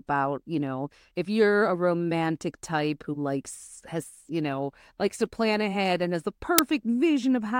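At 6.58 s, just after "ahead and has the", an uninitialised buffer plays: a roughly 5 ms loud digital noise burst, which fits a 256-sample block of leftover memory.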